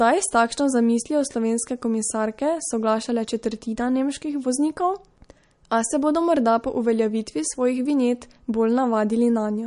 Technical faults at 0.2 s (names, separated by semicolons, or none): MP3 compression